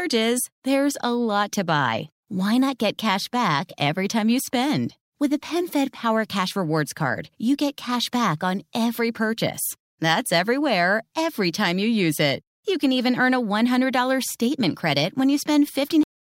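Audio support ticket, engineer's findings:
Cut-off end at 16.03 s. Speech stops mid-sound. Drops straight to digital silence, no decay or tail. Silence holds for the final 0.32 s. Probable component: capture or write path at stream close. Mechanism: last buffers never flushed to file or output, so the sound ends where the data ran out.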